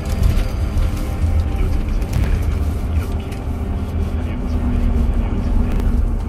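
Chunks out of order at 2.16 to 2.24 s and again at 5.72 to 5.80 s break up this recording of everyday sounds. At each spot a 40 ms block of audio arrived late and plays one chunk after the block that should have followed it. Nothing is missing, but the swapped order leaves a brief jumbled stutter with three hard joins.

A doubled audio track begins abruptly at 4.54 s and continues to the end. A second full-band copy of the sound runs about a second behind the original and roughly 5 dB quieter. It has no decay or room colouring, so it is not reverb. It is an exact delayed duplicate layered on top. The likely cause is a second, slower capture path or an edit that left two out-of-step copies mixed together.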